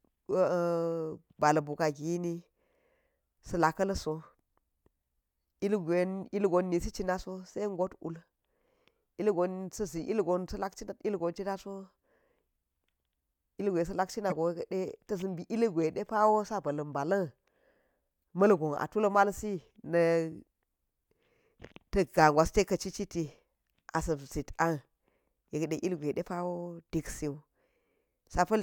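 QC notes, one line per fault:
14.30–14.32 s, corrupt frame decoded: a short glitch peaking near -20 dBFS as a few damaged compressed frames played anyway, scattering energy into the wrong frequencies.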